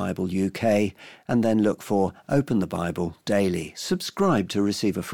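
A short bit of speech, and there's nothing technically wrong to point to anywhere in it.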